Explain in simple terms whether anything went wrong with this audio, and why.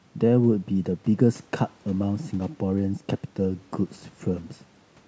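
Nothing went wrong with this audio: the faint room noise behind the speech and the call microphone processing that trims the lowest bass are both normal.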